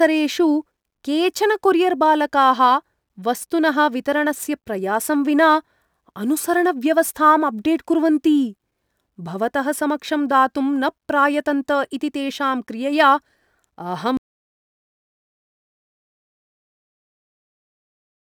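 At 14.17 s the speech cuts off mid-flow in an audio dropout to silence that runs to the end of the clip, about 4.2 s. The input was likely lost, with silence written after that point. The waveform flattens to a line, and the spectrogram goes fully blank, with no room tone left.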